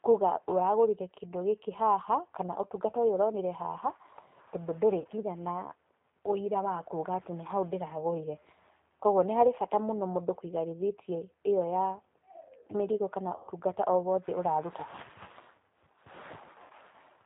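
The whole clip runs through a G.729 codec at 8 kbit/s, so the speech sounds thin, band-limited and a bit rough and synthetic. There's VoIP packet loss concealed by the speech codec at 5.00–5.06 s (about 40 ms lost), 8.43–8.46 s (20 ms), 13.36–13.52 s (120 ms) and 16.62–16.72 s (80 ms). Each time, the decoder stretches the last sound into a fading smear that stays weak briefly afterwards.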